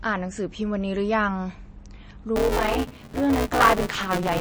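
From the start the speech sounds watery and dull, which fits heavy MP3 compression at a low bitrate, likely around 32 kbps. At 2.36 s buffer tearing kicks in and runs to the end: most of each buffer replays audio about 10 ms old, giving a robotic 188 Hz buzz that fits a 256-sample buffer.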